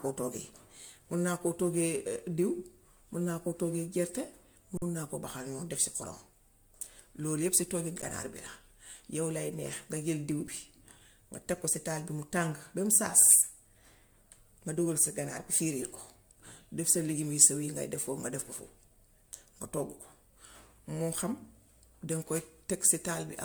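Throughout, the speech sounds swirly and hollow, with blurred consonant attacks and smeared holes on the spectrogram below a 20.1 kHz ceiling. This is likely generation loss from roughly seven MP3 passes, fitting 128 kbit/s. Underruns with held samples flatten the waveform into level lines at 4.77–4.82 s, just before "naa koo baxal", then at 8.02 s and 10.47 s, where playback resumes exactly where it stopped.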